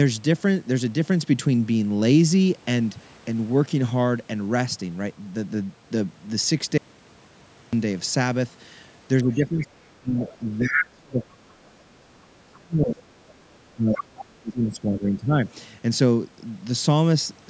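A speech recording from a call, with the band stopping at 8 kHz. At 6.78 s the speech vanishes abruptly. It returns at 7.73 s. For that 0.95 s only hiss remains, about 45 dB below the speech. This is an audio dropout to a faint residue. The break is sudden, not a pause or fade. The path after the break evidently stayed live. The likely cause is a brief loss of the wanted signal upstream. Between 9.22 and 13.29 s the speech dips and breaks up in pieces. It happens again from 13.74 to 15.4 s. The deepest drops reach roughly 30 dB and 35 dB. This is speech suppressed in double talk. Both ends were talking at once. The echo canceller likely could not tell the local talker from loudspeaker echo. So it turned everything down. The other side's voice is also leaking through. Scraps of it appear at 9.33 to 9.65 s, 10.29 to 10.37 s, 13.28 to 13.33 s and 13.93 to 14.24 s. They sit roughly 20, 25, 35 and 10 dB below the speech. 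The far voice likely plays from the device's loudspeaker. The echo canceller failed to remove all of it from the microphone.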